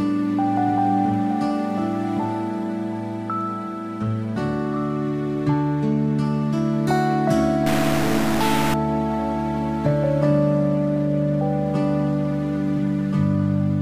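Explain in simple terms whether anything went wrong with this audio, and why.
From 7.66 to 8.74 seconds, the sound turns harsh and buzzy. The likely cause is a stuck bit. One digit in the stored numbers stays fixed, so about half the values jump by a fairly large fixed step. That roughness follows the waveform.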